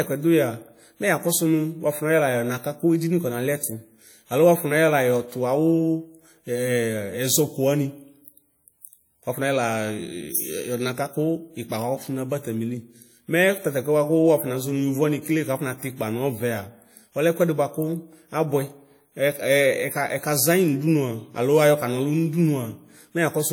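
Throughout the speech, a ringing, washy smear trails each sound, with hiss that breathes along with the signal. This is likely WMA compression at a low bitrate, near 48 kbps. Unlike band-limited MP3, content reaches 20.1 kHz, so smearing rather than missing treble identifies it.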